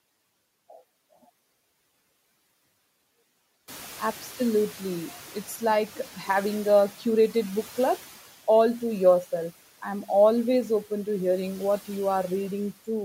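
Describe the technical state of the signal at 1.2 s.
At 1.2 s the signal is intact, with no dropout, distortion or other technical fault to be heard.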